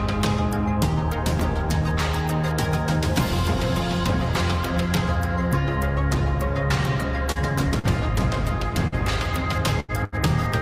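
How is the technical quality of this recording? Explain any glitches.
The recording is marred by network dropouts in its final three seconds, where stretches of audio failed to arrive and were patched over by the receiver.

Short concealed packet loss occurs at 7.31–7.38 s and 7.79–7.86 s. Each time, about 40 ms of data never reached the decoder in time, so it extrapolated the preceding sound across the hole and blended back into the real signal. Each event comes out as a brief smear or wobble.

Burst of packet loss follows at 8.87–8.95 s, 9.80–9.91 s and 10.04–10.15 s, with about 40, 80 and 80 ms lost. The receiver stretched the last sound and faded it over each gap, producing a held buzz or dying hiss before the audio resumes with a section skipped.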